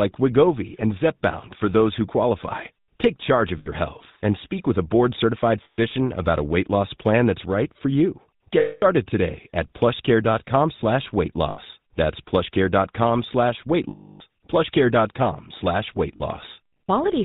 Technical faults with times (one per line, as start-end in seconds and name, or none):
0.00-17.25 GSM full-rate codec
3.58-3.69 lost GSM frames
5.64-5.79 lost GSM frames
8.60-8.83 lost GSM frames
11.50-11.59 lost GSM frames
13.90-14.21 lost GSM frames
16.16-16.21 lost GSM frames